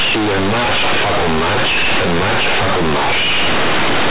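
Throughout the clip, mu-law companded audio is being read as linear 8-bit samples: the logarithmic telephone bytes reach the output without expansion. Every sign change throws the waveform across roughly half its range, so quiet passages come out as large as loud ones and the shape of the speech is badly bent. The result is very loud, buzzy distortion with heavy noise filling the pauses, all within a band that stops below 4 kHz, which fits G.711 telephone coding.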